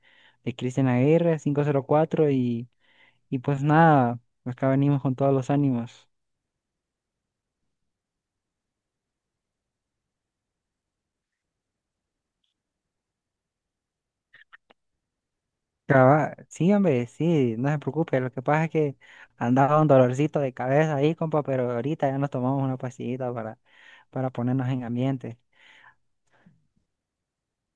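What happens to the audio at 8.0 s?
Nothing goes wrong at 8.0 s; the speech runs through that moment intact, with no audible fault.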